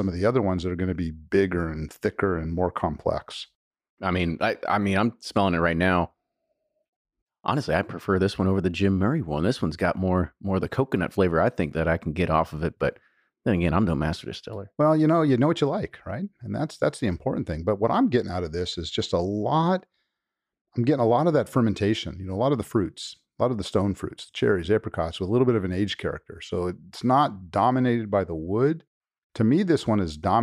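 No technical faults detected.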